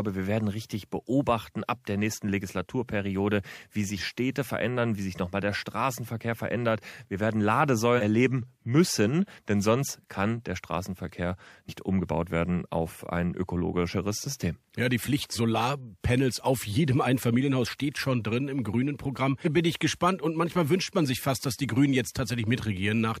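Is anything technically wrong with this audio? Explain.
Yes. Compressed frames were skipped at 3.97–4.01, 7.97–8.01 (before "erleben müssen denn sonst"), 11.68–11.72 (before "umgebaut werden auf ein"), 15.35–15.39 and 19.44–19.48 s. Whole frames, fitting roughly 46 ms each, were dropped, so the speech jumps ahead by about half a second, 0.7 s, 150 ms, 200 ms and half a second. At each join the speech jumps abruptly. The waveform shows an abrupt envelope change, and the spectrogram shows a discontinuity in the harmonics.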